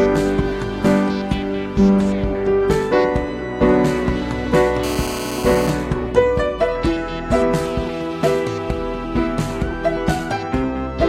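A hard, raspy buzz cuts across the audio from 4.84 s to 5.70 s, pitched at about 217 Hz and thick with harmonics, holding steady at about 10 dB below the wanted signal and bearing no relation to it. This is GSM phone buzz: a nearby 2G handset on a call transmits in bursts 216.7 times a second, and the audio circuitry rectifies those radio pulses into the buzz heard here.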